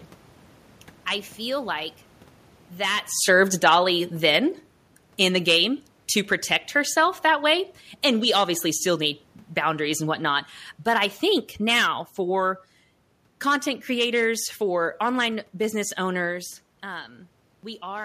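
A speech recording where, from 2.79 to 4.59 s, automatic gain falling kicks in: the AGC decides the input's too hot and eases the gain down about 3 dB, taking the room noise with it.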